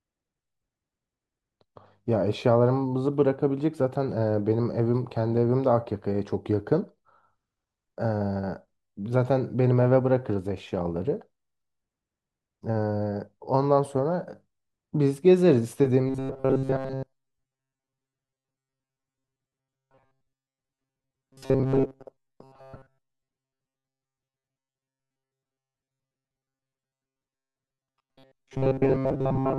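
A speech recording turns robotic from 16.08 s through to the end. The voice becomes a rigid, metallic buzz pitched at 133 Hz. It still loosely tracks the words. This is robotic sound from repeated short buffers. The likely cause is audio arriving too seldom, so the player keeps looping the last fragment. A 133 Hz buzz fits a fragment of about 7.5 ms. Most of the real audio in this stretch is skipped.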